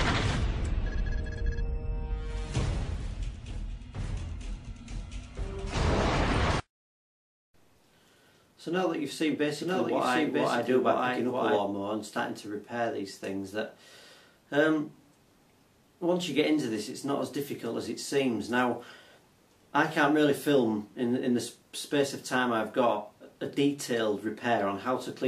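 A second capture path or an out-of-step edit has likely mixed the audio in twice, producing a doubled audio track from 9.56 to 11.60 s: a full-band copy about as loud as the original trails about a second behind, starting and stopping abruptly.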